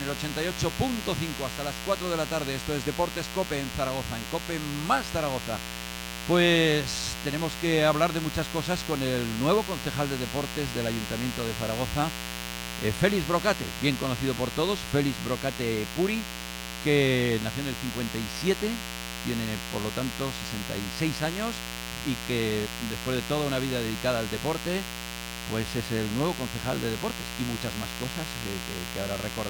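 Mains buzz runs through the whole recording: a missing shield, dimmer or rectifier let switching spikes from a 60 Hz supply into the audio path twice per cycle. Their harmonics climb into the kilohertz range, laying a steady, raspy buzz only roughly 10 dB beneath the sound.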